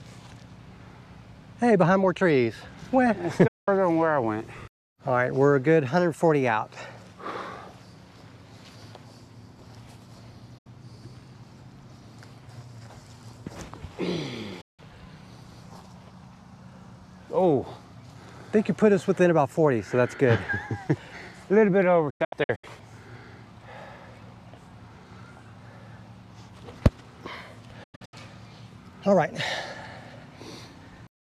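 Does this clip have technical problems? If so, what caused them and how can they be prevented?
Yes. This is digital broadcast dropout: the receiver lost the signal or rejected corrupt frames and muted, so the sound fades to silence within 8 ms at 3.47, 10.58, 14.61, 22.10–22.64 and 27.83–28.14 s. The last two are clusters of short holes. Better reception and stronger error protection prevent it.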